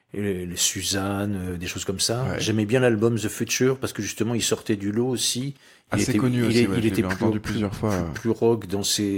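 No technical faults can be heard anywhere here.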